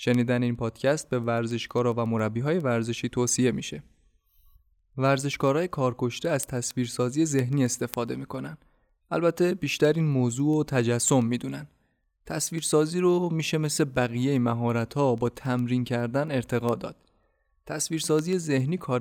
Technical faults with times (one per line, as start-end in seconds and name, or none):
0.14-19.01 word clock ticks